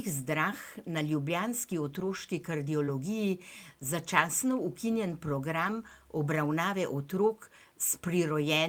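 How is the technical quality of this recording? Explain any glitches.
The recording has several short network-related glitches in this speech clip, all from packet loss on the call path.

Lost packet rebuilt from error correction, at 1.71–1.73 s, at 2.87–2.89 s, and over a longer stretch at 5.63–5.93 s. The missing audio was replaced with a low-bitrate backup copy sent inside the following packet, so there is no silence, but those moments sound grainier and noisier. The 0.3 s stretch holds eight separate lost packets, about 160 ms rebuilt in total. On a spectrogram these spans show a blurrier, noisier texture. The waveform stays continuous.

Short concealed packet loss, at 2.85–2.89 s. About 20 ms never arrived in time, so the decoder extended the preceding sound for about 21 ms, then faded into the backup-rebuilt audio that follows. It comes across as a quick smear or wobble.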